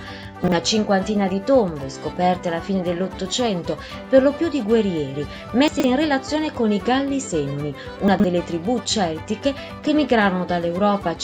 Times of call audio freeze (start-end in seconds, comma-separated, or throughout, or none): none